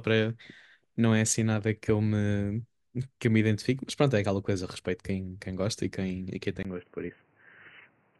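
At 6.63 s, after a 20 ms gap, the speech turns dull and quieter, with the spectrogram empty above 3 kHz, likely an input switched to a poorer device.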